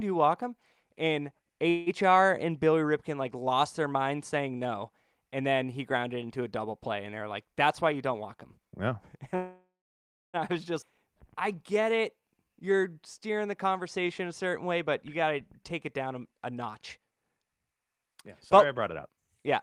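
The clip is speech, and it has a call audio freeze at 1.69 to 1.89 s. The sound there is stretched into a fading fill for about 170 ms. Packets were likely held up and the jitter buffer ran empty. Nothing is lost; a gap is simply inserted. A second call audio freeze runs from 9.35 to 10.37 s, just before "I was". It lasts about 981 ms, and 640 ms of that is silence. The likely cause is again a starved jitter buffer. When the audio resumes, it carries on from where it stopped. A jitter buffer speed-up starts right after "play and they're like", from 7.45 to 9.19 s. Playback runs at 107% speed with the pitch unchanged. Roughly 150 ms is trimmed out in small pitch-period pieces, and the speech sounds hurried. The receiver was cutting excess delay. A skip ahead follows at 10.82 to 10.85 s, just after "I was". About 0.7 s of audio is dropped. The two sides are joined almost directly, with only about 5 ms of fill. 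A jitter buffer slow-down runs from 11.08 to 14.66 s. Speech plays at 91% speed at the same pitch. About 313 ms is added by repeating single pitch periods and bits of pauses. Sounds are drawn out as the buffer rebuilds its reserve. Two more jitter buffer speed-ups come near the end. The first runs from 15.65 to 18.15 s at 120% speed and removes roughly half a second. The second runs from 18.59 to 19.58 s at 109% and removes roughly 100 ms. Both keep the pitch unchanged.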